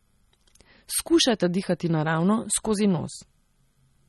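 Throughout, likely MP3 compression short of bits, fitting roughly 32 kbps, removes everything above 11.8 kHz and flickers weak frequency lines, leaving the speech plainly watery.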